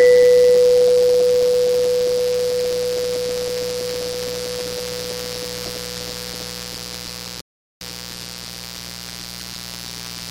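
A steady, raspy buzz sits under the music from start to finish, roughly 15 dB below it. This is mains buzz: switching spikes from a dimmer, rectifier or poor shielding, twice in every cycle of the 60 Hz mains, with harmonics reaching into the kilohertz range.

At 7.41 s the music drops abruptly into silence, then picks up at 7.81 s exactly where it stopped, with nothing missing. That is a rebuffering stall: the player ran out of downloaded audio and waited, adding about 0.4 s of dead air.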